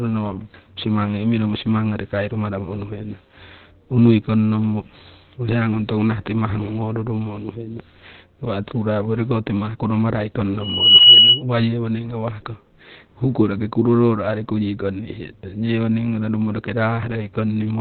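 Throughout, the speech is muffled and hoarse, with nothing above 4.2 kHz. This is likely Opus compression in its narrowband SILK speech mode, which points to a low rate near 12 kbps. It sounds rough and band-limited rather than swirly, unlike MP3 damage.

From 10.60 to 11.43 s a loudspeaker feedback squeal appears. A single 2.9 kHz tone swells over about a third of a second until it sits well above the speech. That self-building growth separates it from a steady interference whistle.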